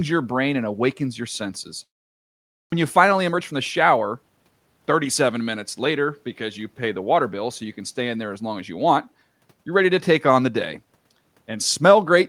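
A long network dropout runs from 1.83 to 2.74 s. The sound gives way to a brief fading buzz and then near-silence for about 0.85 s. This is likely a stretch of lost packets, with roughly 0.6 s of speech gone when the audio resumes.

A jitter buffer speed-up follows from 3.00 to 4.94 s. Audio had piled up after the gap, so the receiver cut many tiny pitch-period slices, around 0.3 s in total, and speech runs at about 113% speed, hurried but unchanged in pitch.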